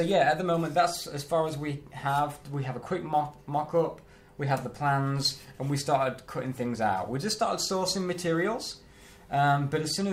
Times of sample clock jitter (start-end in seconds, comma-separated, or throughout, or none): 3.12-10.11